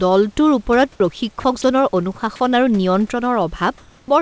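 The voice detector likely misjudged the speech as background and stopped sending at 0.96–1.00, 1.40–1.44, 1.62–1.64 and 2.36–2.40 s, so sound dropped by the voice detector leaves brief flat noise patches inside the speech. From 3.78 to 4.08 s, discontinuous transmission likely halted sending, and comfort noise in place of the background swaps the room's real texture for a steady, featureless hiss about 1 dB off the true level. Nothing above 8 kHz is heard throughout, which fits a G.722 call path.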